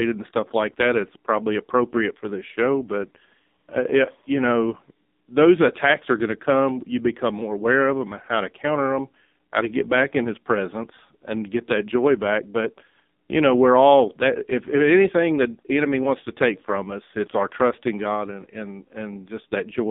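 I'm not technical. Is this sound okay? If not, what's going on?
No. Throughout, the speech has been squeezed through an AMR narrowband mobile codec, like an old phone call: muffled, thin, and heavily buzzy and robotic.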